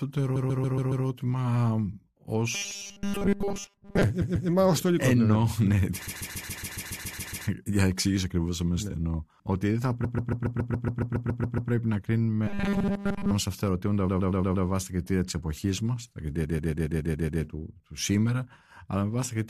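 A run of compressed frames was sent again several times from 0.35 to 1.05 s, so the decoder replays the same 139 ms block, which fits six frames, adding about 0.7 s. This is the repeated frames fault, heard as a stutter. From 2.55 to 4.03 s, ending just before "ε μα ως ιστορικός", new audio likely arrived too seldom, so the last 5 ms was repeated and roughly 70 percent of the real audio skipped. This robotic sound from repeated short buffers imposes a rigid 200 Hz metallic buzz. The same stutter returns at 4.21 to 4.48 s before "μα ως ιστορικός" (about 0.28 s added), 6.06 to 7.46 s (1.39 s), and 10.03 to 11.71 s (1.67 s). The buzz recurs at 12.47 to 13.31 s. A 116 ms block repeats at 14.07 to 14.65 s, between "σε αυτά τα ερωτήματα" and "βάσει τα κριτήρια της", adding 0.58 s. The 139 ms block repeats again at 16.44 to 17.42 s, adding 0.98 s.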